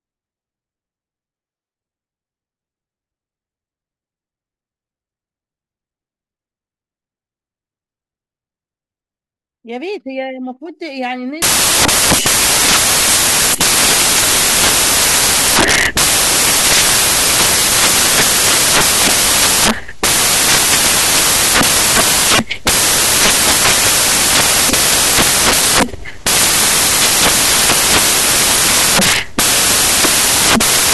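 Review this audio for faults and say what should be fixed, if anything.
From 11.42 s to the end, the speech turns into loud, harsh broadband noise. This is samples built from the wrong bytes. The decoder assembles each sample with its bytes misordered or misaligned. The rapidly changing low-order bits then land in the high-order positions. Each value becomes essentially random and large. To prevent it, declare the byte order and sample alignment explicitly and check them whenever the stream is read.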